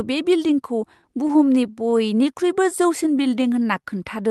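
From 1.01 to 2.24 s the speech shows repeated stalls (stutter). Packets kept arriving late, so the jitter buffer ran dry 13 times, and each short wait, none longer than 14 ms, was filled by continuing the last sound. Unlike dropouts, nothing is lost; the speech just catches and drags.

From 3.04 to 3.83 s a jitter buffer slow-down sets in. To rebuild its reserve, the receiver repeated single pitch periods, adding 90 ms and running at 90% speed. The pitch stays put, which separates it from a tape-style slowdown, while sounds stretch.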